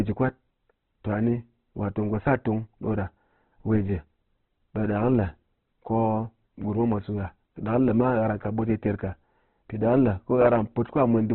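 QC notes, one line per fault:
Throughout, Opus compression, likely the cause: the speech is squeezed into narrowband with nothing above about 4.1 kHz, so it sounds boxed-in and dull. The damage is heavy. The encoder keeps each band's overall energy but, starved of bits, patches the detail with folded copies of lower bands or plain noise. That's why the tone comes across rough and grainy rather than swirly, which fits a very low bitrate around 12 kbps.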